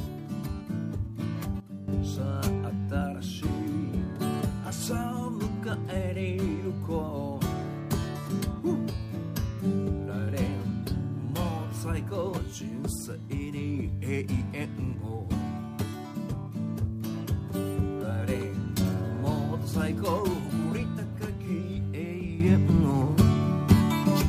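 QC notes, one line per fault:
1.6–1.88 s, sudden gain jump: sound and background noise drop together by about 13 dB in one step, then snap back, likely an unramped digital gain change.
22.4 s to end, sudden gain jump: level and noise floor leap up about 11 dB instantly and stay raised, pointing to a likely unramped digital gain setting applied mid-stream.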